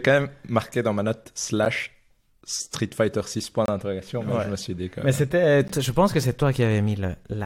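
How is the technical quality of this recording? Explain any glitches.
The recording has three brief dropouts, spaced about 2 s apart, caused by a gap between stream segments. The first is at 1.65 s, lasting about 9 ms, right after "marqué dans ma note". The second runs from 3.66 to 3.68 s, about 26 ms, just before "d'interrogation ouais je me". The third is at 5.68 s, about 15 ms. At each 2-second segment boundary the timestamps leave a small hole, which the player fills with silence. The result is a hard-edged cut in the speech, with nothing actually missing.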